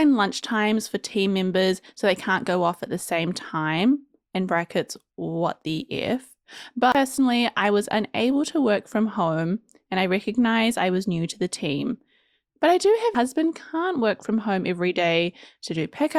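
A tick, a brief mute of around 30 ms and a jump in the speech at 6.92 to 6.95 s, then a tiny dropout at 13.15 s: CD skips, where the laser leapt to another turn of the spiral.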